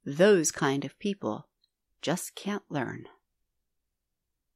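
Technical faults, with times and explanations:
Nothing technical gets in the way here; the speech simply runs on with no faults to point to at any time.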